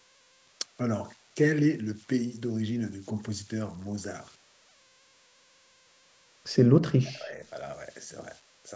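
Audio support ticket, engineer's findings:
Converter idle tones, full length of the speech: whistle near 500 Hz in pauses, grainy noise under quiet passages, error about 25 dB below signal. Undithered delta-sigma converter locking into repeating bit patterns at low input; tone pitch tracks DC offset.

Background gated by the echo canceller, 6.65 to 6.71 s: room sound drops about 40 dB for a few tens of milliseconds, then returns. Canceller clamping microphone gain hard while far-end loudspeaker active, then releasing.

Speech suppressed in double talk, 6.99 to 7.39 s: near-end speech dips deeply, roughly 30 dB, for about 0.4 s. Likely echo canceller failing to separate local talker from loudspeaker echo during simultaneous talk, attenuating both. Band-limited to 8 kHz by call processing.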